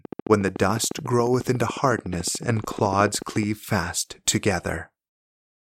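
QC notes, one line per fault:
0.05–3.44 s, train of clicks: likely interference or a faulty connection injecting regular pulses at 13.9 per second, heard as around fifty ticks peaking a few dB above the speech.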